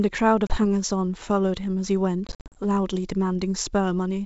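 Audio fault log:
0.47–0.58 s, packet loss on an ADPCM call: a few packets, about 30 ms in total, drop out as a hard-edged silent gap. The decoder's adaptive predictor and step size lose track of the sender's, so the speech comes back slightly distorted before it settles.
2.27–2.59 s, packet loss on an ADPCM call: around twenty packets, 180 ms in total, are lost across a 280 ms stretch, with the longest run 50 ms. This produces repeated choppy holes, and each restart briefly distorts while the mismatched decoder state settles.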